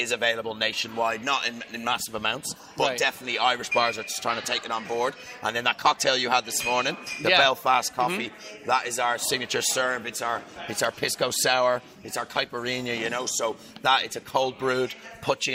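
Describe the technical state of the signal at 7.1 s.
At 7.1 s the signal is intact, with no dropout, distortion, glitch or other audible fault at that point.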